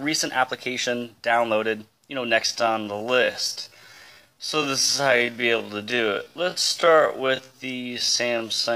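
From 2.42 s to the end, the pace suddenly drops to roughly half speed while the pitch holds steady, so the sound drags. This is a time-stretched section, likely from software slowing it to 0.544 times speed by repeating short pieces.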